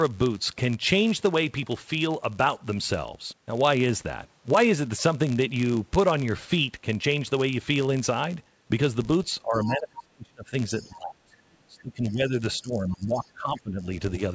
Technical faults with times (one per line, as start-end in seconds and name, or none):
0.00-14.34 block size mismatch (padded)
9.42-10.54 speech suppressed in double talk
9.65-9.71 other side's voice leaking through
10.78-10.93 other side's voice leaking through
10.88-13.86 speech suppressed in double talk
13.24-13.30 other side's voice leaking through